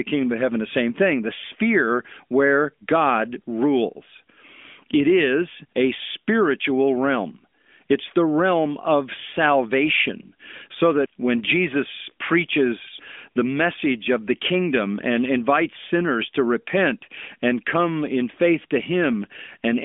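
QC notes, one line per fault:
No faults found.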